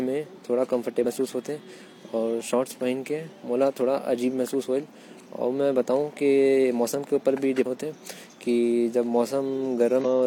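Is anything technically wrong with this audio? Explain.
Yes. Three brief glitches cut through the speech, at 1.00 to 1.06 s, 7.62 to 7.67 s and 10.01 to 10.06 s, each about 50 ms of disrupted sound in place of the voice. These come from damaged data in a compressed stream: corrupted bytes made the decoder misread those frames, so it lost sync and produced garbage until it locked onto the next valid frame header.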